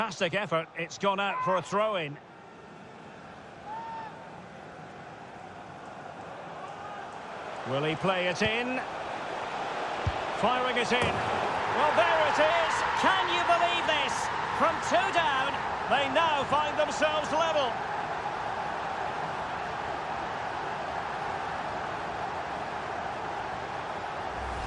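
From 12.50 to 15.66 s the sound has a wrong sample rate fault: playback runs about 1.09 times too fast with no conversion, lifting pitch by 1.47 semitones. The audio turns brighter and hurried, which fits 22 kHz material played at 24 kHz.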